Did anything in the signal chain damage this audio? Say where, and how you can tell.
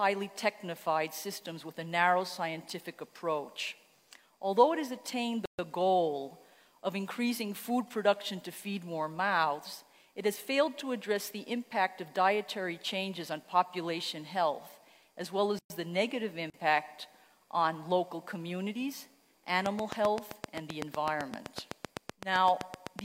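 Yes. There's a gap at a join of encoded pieces at 5.46 to 5.59 s (about 132 ms) and again at 15.59 to 15.70 s (112 ms), ten seconds apart. That points to the codec stage: separately encoded chunks were joined untrimmed, so encoder delay and padding leave a silent hole before the sound resumes.

Then a train of clicks runs from 19.66 s to 23.0 s. There are roughly thirty near-identical pops at a steady 7.8 per second, peaking about 20 dB above the signal. That's likely interference in the analogue wiring or a faulty connection or power supply injecting pulses.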